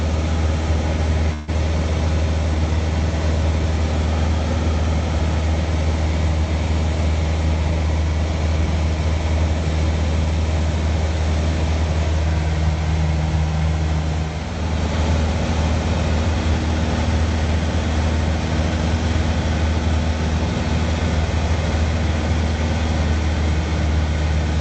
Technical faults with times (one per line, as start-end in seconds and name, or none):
1.33-1.50 call audio freeze
6.95-8.40 jitter buffer speed-up